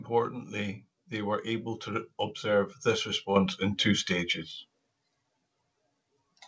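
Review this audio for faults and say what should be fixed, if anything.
At 3.36 s, between "able to observe this" and "in two stages", the microphone volume is stepped up: the input level jumps by about 7 dB in one step as the call software raises a mic it judged too quiet. Unlike a talker leaning closer, the background noise rises along with the speech. To prevent it, set the input level correctly beforehand and turn off automatic microphone gain adjustment in the call software. The call path itself, with nothing above 8 kHz as fits a wideband codec such as G.722, needs no fix.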